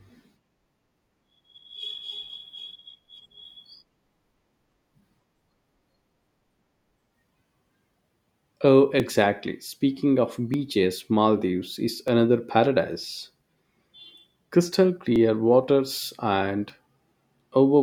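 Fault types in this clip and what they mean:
Clock drift buffer slips: regular clicks recur every 1.54 s from 1.30 s to 16.70 s, about ten in the speech. Likely two unsynchronised clocks roughly 1000 ppm apart, so the buffer drifts until a block of several dozen samples is dropped or repeated.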